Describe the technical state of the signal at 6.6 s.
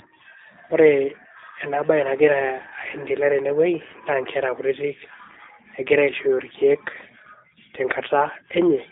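At 6.6 s you're hearing the G.729 codec, which runs through the whole clip rather than just this moment. The speech is being rebuilt from a vocal tract filter, a pitch predictor and a handful of pulses per 10 ms frame, which fits an 8 kbit/s VoIP link. So it sounds slightly rough and synthetic, with the damage plainly audible, confined to a 300 Hz to 3.7 kHz telephone band and nothing above 3.8 kHz.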